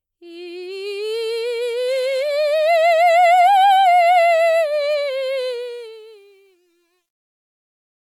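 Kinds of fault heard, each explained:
Truncation distortion on a fade: from 5.52 s the music's fade-out steps coarsely, which fits an undithered 10-bit stage, turning gritty from 6.36 s on.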